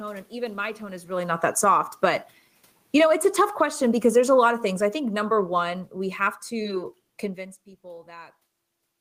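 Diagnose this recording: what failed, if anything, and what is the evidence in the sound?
Automatic gain falling in call processing pulls the level down about 6 dB from 1.34 to 1.80 s and about 10 dB from 2.81 to 6.89 s. The room noise sinks with the speech, so it is not the talker moving, as happens near 1 s.

Automatic gain rising, also in call processing, lifts the level about 5 dB between 1.77 and 2.31 s, right after the first drop. Speech and room noise swell together over about half a second, unlike a talker leaning closer, which raises the voice alone.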